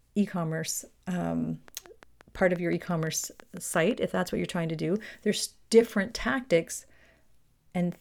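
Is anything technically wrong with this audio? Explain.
Yes. From 1.68 s to 3.92 s, just after "e commerce um" and before "if that's what you're", the speech carries a train of clicks. They come at a regular 5.8 per second, about fifteen in all, peaking about 5 dB above the speech. They're heard as a steady ticking over the words, which points to a likely outside source such as interference or a faulty connection. Because each click has much the same shape and they keep an even pace, this isn't random crackle or scattered dropouts.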